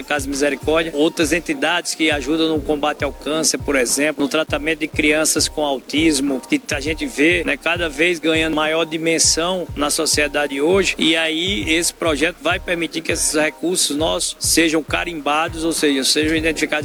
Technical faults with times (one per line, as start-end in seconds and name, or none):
0.00-16.84 low bit depth without dither